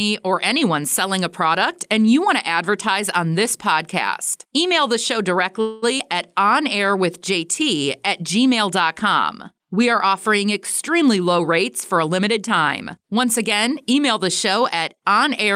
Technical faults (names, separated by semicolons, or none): call audio freeze; skip ahead; jitter buffer slow-down; jitter buffer speed-up